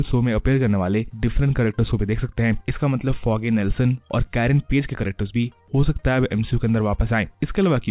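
No technical faults can be heard anywhere in this clip. The audio came through a WebRTC call path with nothing above 4 kHz, which fits the narrowband G.711 A-law codec at 64 kbps.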